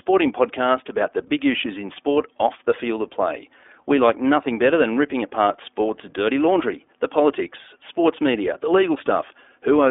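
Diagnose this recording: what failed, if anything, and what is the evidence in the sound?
Codec stage: iLBC coding throughout, with nothing above 3.7 kHz, a 300 Hz to 3.6 kHz band, and plainly rough, synthetic speech from independently coded 20 ms frames, fitting its 15.2 kbps mode.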